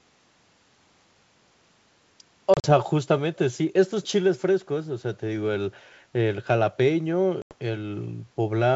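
From 2.54 to 2.72 s, packet loss on an ADPCM call cuts about 70 ms of audio, scattered over 100 ms with the longest gap 40 ms, which fits roughly seven lost packets. The decoder's predictor and step size lose track of the sender's, so hard silent holes are followed by speech that returns slightly distorted.

From 4.03 to 4.08 s, a short echo leak is heard. This is likely a loudspeaker on one side whose echo canceller let part of the signal through. A very faint copy, around 30 dB below the speech, trails by about 457 ms.

From 7.42 to 7.55 s, the same packet loss drops about 90 ms, which points to roughly ten lost packets. A sharp-edged gap follows, and the audio resumes unsettled before the decoder recovers.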